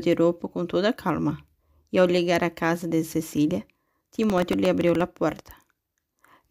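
Speech runs cleanly until processor overload crackle from 4.23 to 5.01 s. Roughly fifteen tiny buffers, each under a millisecond, miss their deadline and replay stale audio with hard edges, giving a gritty tearing. On a spectrogram this shows as broadband vertical streaks, and the waveform shows small abrupt steps.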